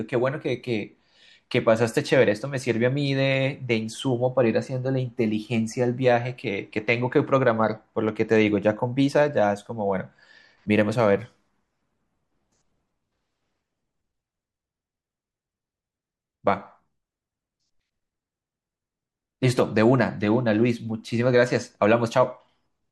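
No faults can be heard anywhere in the recording, and nothing calls for attention.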